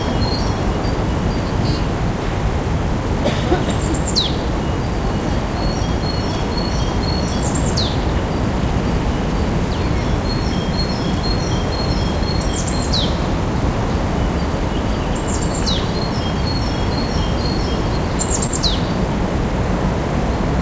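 At 18.47 to 18.61 s, short concealed packet loss: about 20 ms of the stream never reached the decoder in time, so it extrapolated around 11 ms from the preceding sound and blended back, adding a few milliseconds and leaving a brief smeared wobble through G.722's 8 kHz-limited band.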